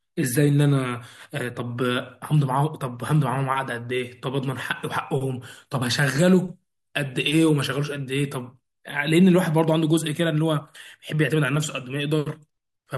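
No technical faults are audible anywhere in this recording.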